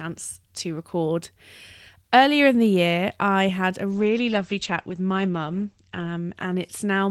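From 3.93 s, after "year I had a", a call bitrate drop starves the encoder. Everything above 8 kHz disappears, and the speech stays coarse and muffled through the end.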